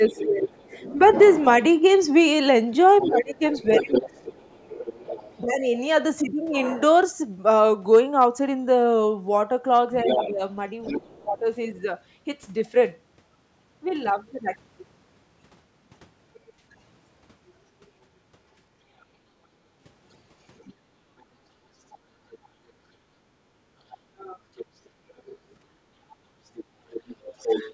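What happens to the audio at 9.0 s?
Nothing goes wrong at 9.0 s: the speech carries straight through that moment with no dropout, glitch or distortion, and only the ordinary call microphone processing is present.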